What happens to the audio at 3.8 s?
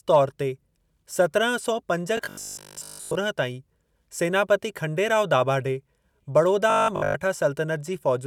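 Nothing goes wrong at 3.8 s; the audio runs on intact through that moment, with no dropout, click, distortion or other fault.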